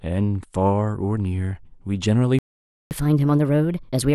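Speech clip with a playback stall: the audio cuts to silence at 2.39 s and stays silent until 2.91 s, a gap of 0.52 s, most likely because the player ran out of buffered data or its output thread was blocked. When sound resumes at 2.91 s, catch-up at higher speed takes over through to the end of the clip. The backlog is resampled to 1.25 times normal speed, so tempo and pitch rise together, the pitch by roughly four semitones, as the player recovers some of the lost time.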